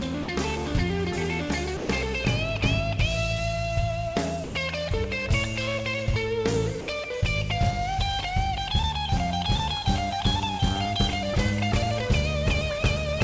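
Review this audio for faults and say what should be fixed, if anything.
Four short gaps are heard where the sound gives way to steady, featureless noise. They fall at 0.23 to 0.28 s (50 ms), 1.77 to 1.89 s (120 ms), 4.44 to 4.55 s (110 ms) and 6.81 to 6.88 s (70 ms). The likely cause is sound dropped by the voice detector. The sender judged quiet passages to be background and stopped transmitting. The receiver filled each gap with comfort noise until the detector triggered again. The band limit at 8 kHz fits a G.722 call path. To prevent this, raise the detector's sensitivity, lengthen its hangover time, or turn voice activity detection off.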